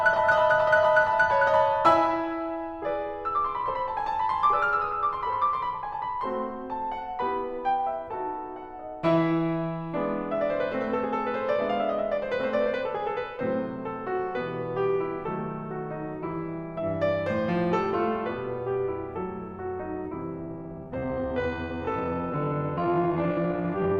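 From 20.4 s to the end of the music, a time-stretched section slows the pace abruptly to roughly half speed (0.512×) while the pitch holds. The likely cause is software stretching the passage to fill a length by repeating short slices. The result drags. On a spectrogram, harmonic lines keep their frequencies but lengthen, and transients widen into repeated smudges. The waveform shows slackened, stuttering envelopes.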